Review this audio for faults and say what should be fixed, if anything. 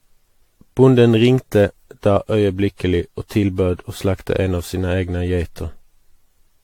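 The whole speech clip has generation loss: it sounds swirly and hollow, attacks are smeared, and nothing comes through above 18.6 kHz. The likely cause is about ten rounds of AAC-LC encoding near 96 kbit/s, each pass re-quantising on a shifted frame grid so the errors pile up. To prevent it, go back to the uncompressed or first-generation source and encode only once at the end.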